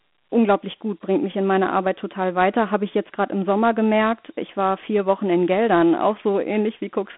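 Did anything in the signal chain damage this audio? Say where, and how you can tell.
Yes, the damage comes from the codec stage, Dialogic VOX ADPCM, and it runs through the whole clip. The speech sits in a telephone band from about 200 Hz to 3.5 kHz, with nothing above 3.9 kHz, which fits 4-bit samples at 8,000 per second (32 kbps). The coarse adaptive step size leaves a gritty hiss that rises and falls with the speech. That grit separates it from G.711 telephone audio, which is band-limited but far cleaner, and from perceptual codecs, whose artefacts sound swirly rather than grainy.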